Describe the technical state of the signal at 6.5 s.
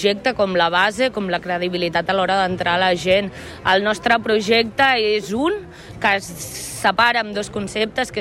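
The signal at 6.5 s is intact, with no audible technical fault at that point.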